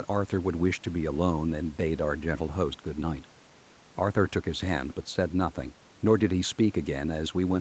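No technical faults are audible.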